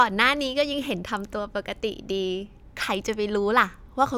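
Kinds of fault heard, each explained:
No faults can be heard in this speech recording.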